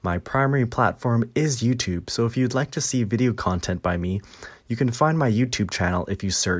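Listening to this speech recording, nothing stood out as a technical problem at any point.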